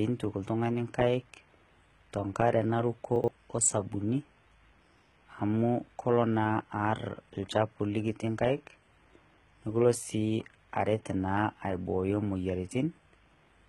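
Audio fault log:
Throughout, HE-AAC compression: the top end has a gritty, heavily metallic edge, with s sounds turning lispy and nothing above about 11.8 kHz. It's likely HE-AAC at a low bitrate, something like 16 kbps, rebuilding treble from copied lower bands so harmonics don't line up.
3.16 to 3.28 s, chunks out of order: right after "te nk'are naruku" there's a brief jumbled stretch. A 40 ms slice plays two slots late, after the pieces meant to follow it, so nothing's missing but the sequence is scrambled.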